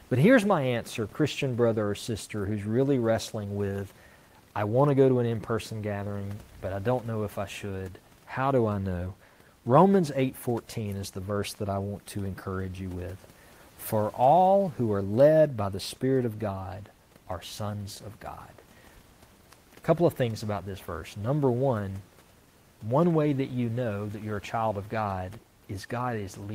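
No technical faults are audible anywhere in the speech, and the only background is room noise sitting about 33 dB below it, which belongs to the recording rather than the system.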